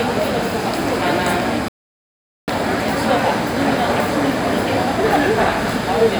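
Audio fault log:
1.68–2.48 s playback stall: the everyday sounds drop to silence mid-flow for 0.80 s, then resume, likely because the player ran out of data or its thread was blocked.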